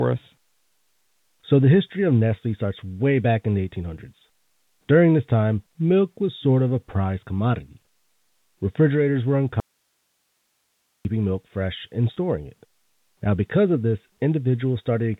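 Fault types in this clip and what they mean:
Audio dropout to a faint residue: From 9.6 to 11.05 s the sound cuts out abruptly, leaving only faint hiss around 50 dB below the signal for about 1.45 s before "milk fresh and" resumes. This is likely a signal loss upstream while the following path stayed live.
Packet loss with last packet repeated: Just after "milk fresh and", at 12.14 to 12.16 s, a small blip marks a single lost 20 ms packet. The receiver replayed the previous packet.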